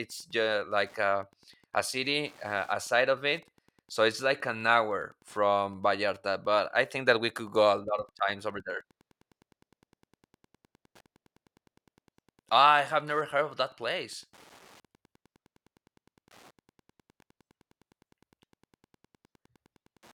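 From start to finish, the speech sits on top of a faint, steady ticking at about ten clicks a second: classic Wi-Fi interference. A Wi-Fi radio close to the audio circuitry sends out a beacon every 102.4 ms, and the circuit rectifies those bursts into audible clicks. They sit well below the speech, around 35 dB down, so you mostly catch the ticking in the pauses, where it keeps ticking away regardless of what's being said.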